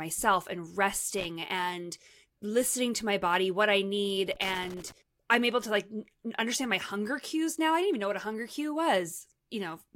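At 1.18 to 1.25 s, before "and listening to my", and 4.33 to 4.92 s, between "body what i need" and "i'm able to like", loose connector crackle: a failing contact chops the speech into irregular scratchy bursts, unlike evenly spaced digital clicks.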